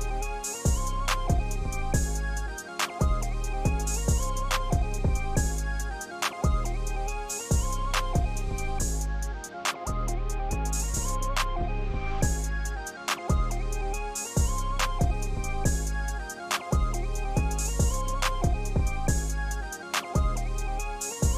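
No technical faults are audible anywhere in the recording.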